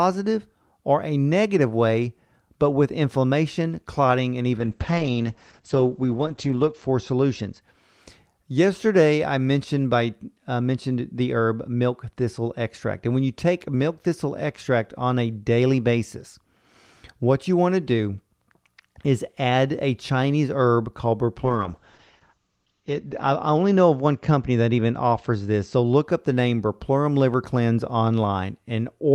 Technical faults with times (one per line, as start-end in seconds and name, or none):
4.60-7.67 call bitrate drop
21.45-26.09 call bitrate drop